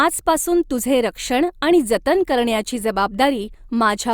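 No technical faults are audible.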